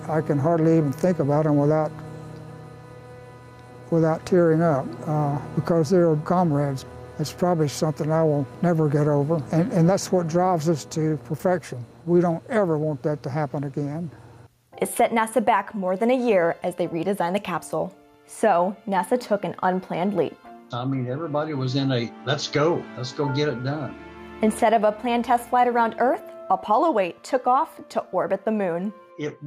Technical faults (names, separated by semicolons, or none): gain pumping